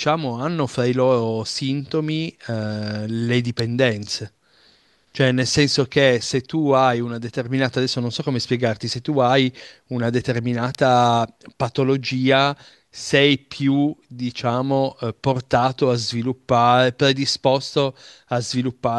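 At 3.59 s and again at 10.75 s there's a sharp snap sitting on top of the speech, each one just a millisecond or two long and peaking at about -10 dBFS. That's an electrical switching spike, likely a nearby switch or motor arcing and getting picked up on the audio line.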